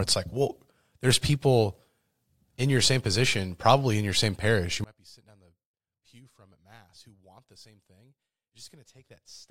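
From 4.84 s to the end the speech drops about 30 dB to a faint trace. The likely cause is one channel inverted: one side's reversed polarity cancels the centred speech shared by both channels when they are summed to mono, leaving only their slight difference.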